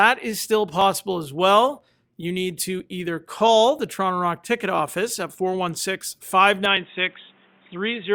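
At 0.81 s, just after "is still", a tiny skip marks the first overlap between stream segments. The same skip recurs at 1.81 s, at 2.80 s just before "either call", at 3.79 s just after "either call", at 4.78 s and at 6.77 s, the first five spaced at roughly one-second intervals. Each time, two one-second chunks of the speech stream arrive with overlapping time stamps. The player trims the overlap, discarding a few milliseconds of audio that was never duplicated, and the waveform jumps at the join.

From 6.66 s to the end, the speech turns dull and boxy. Nothing remains above 3.8 kHz, and a new noise floor appears at about 35 dB below the signal. There is no gap at the transition and no noticeable change in level. This is likely an input switched to a poorer device mid-recording, such as a fallback microphone or a headset call profile, which brings its own narrow bandwidth and background noise.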